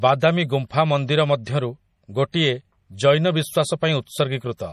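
Throughout the speech, the treble stops dead at 15 kHz, and weak detail flickers in and out, giving a watery, swirly texture with smeared consonant attacks. This is likely MP3 compression, starved of bits in a way that fits roughly 40 kbps.

At 1.44 to 1.47 s, and again at 2.32 s, a brief hiss arrives just ahead of sharp onsets. This is pre-echo: the codec spreads the noise meant for the loud attack across its whole block, so it leaks 25 ms and 17 ms early, softening each attack.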